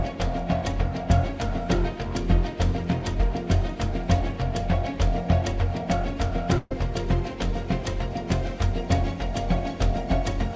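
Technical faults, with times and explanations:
6.58 to 6.72 s, burst of packet loss: a run of lost or late packets left the receiver with nothing to play, so it stretched the last sound it had for about 125 ms and faded it, giving a held buzz or dimming hiss with a brief near-silence of about 10 ms. About 120 ms of the original sound is missing when playback resumes, all within a band that stops at 8 kHz, which fits a G.722 call codec.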